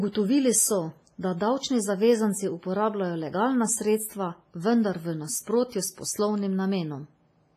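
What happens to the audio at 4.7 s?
At 4.7 s the speech has the same heavy smearing heard through the whole clip. It rings and sounds washy. A hiss breathes with the signal. Nothing sounds above 15.3 kHz. This is likely WMA compression at a low bitrate, around 24 kbps, spreading quantisation noise over tens of milliseconds.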